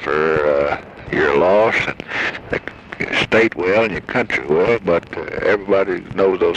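No technical fault can be heard anywhere in the audio; the signal holds steady without any audible break, distortion or other transmission or recording problem.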